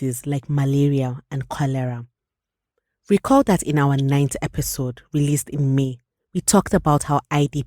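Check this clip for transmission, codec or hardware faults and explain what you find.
One hardware fault is present: sample clock jitter, throughout the recording. The converter's clock wobbles, so each sample is captured slightly early or late. The timing scatter is on the order of a microsecond or two. A timing error turns into an amplitude error wherever the speech waveform is changing fast. The resulting noise sits roughly 35 dB below the speech. It sounds like a fine hiss or grit riding on louder and brighter sounds. It disappears in the pauses.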